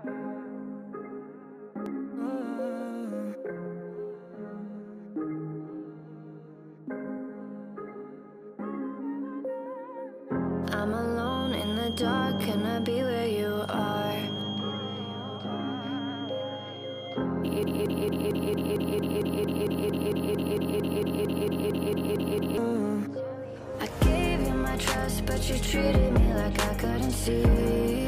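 From 11.14 s to 17.29 s a feedback whistle sits behind the sound: a thin, steady tone at 3.2 kHz, well below the main signal and swelling and fading slowly in level. The likely cause is a loudspeaker-to-microphone loop held right at the edge of feedback, sustaining one frequency without running away.

From 17.63 s to 22.58 s a broken-record loop takes over. A 226 ms fragment repeats exactly, back to back, 22 times, and the audio belonging to that span never plays. This likely comes from the player, encoder or stream stalling and resending the last fragment it held.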